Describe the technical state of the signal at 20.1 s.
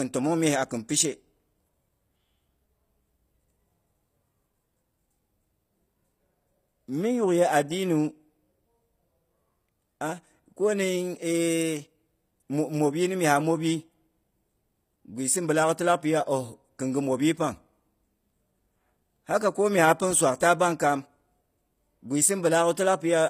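At 20.1 s, as throughout, the speech carries plainly audible codec damage, likely HE-AAC compression at a low bitrate near 24 kbps. The treble is rebuilt from copied lower bands, so s sounds turn gritty and metallic. A spectrogram shows blocky, repeated high-band texture ending abruptly at 15.5 kHz.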